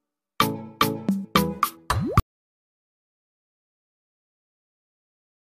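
At 2.2 s the sound cuts out abruptly and never returns. This is an audio dropout to silence. The rest of the clip is silent, with no room tone. The input was likely lost, and silence was written from then on.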